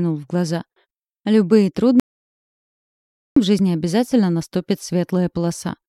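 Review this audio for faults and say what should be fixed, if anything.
Audio dropout to silence, 2.00 to 3.36 s: the sound cuts to total silence with no room tone for 1.37 s, likely from a lost input link or mute. Secure connections and monitor the input live during recording so that an interrupted source is caught and retaken at once.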